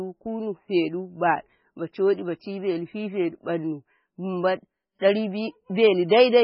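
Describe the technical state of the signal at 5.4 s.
At 5.4 s the speech carries heavy MP3 compression, present throughout and likely from a bitrate near 16 kbps. The encoder has removed everything above 5.5 kHz and zeroes weak frequency lines frame to frame, so the sound is dull and watery, with smeared attacks.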